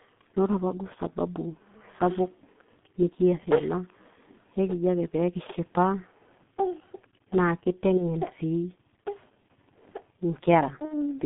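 The whole clip carries G.723.1 codec damage. The speech is confined to a phone band of about 150 Hz to 3.5 kHz. The heavy, hoarse and muffled quality fits a rate near 6.3 kbit/s. Consonants smear because the coarse 30 ms frames update the voice model slowly.

From 7.97 to 8.16 s there is VoIP packet loss concealed by the speech codec. About 30 ms of audio went missing, which fits one lost frame. The decoder repeated its last pitch and filter, so a brief stretched sound fades and the sound stays weak afterwards.

It happens again from 10.85 to 11.12 s. This gap is about 60 ms, which points to two lost frames. The concealment holds longer and decays further. The result is a fading, stretched sound, and the voice is slow to recover once real packets resume.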